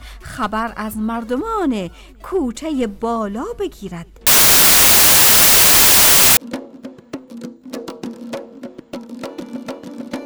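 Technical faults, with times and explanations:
4.27 to 6.37 s, samples built from the wrong bytes: the bytes of each sample are joined wrongly, so the rapidly changing low-order bits become the large part of each value. The result is loud broadband hiss, unlike added noise, which sits under the sound rather than replacing it.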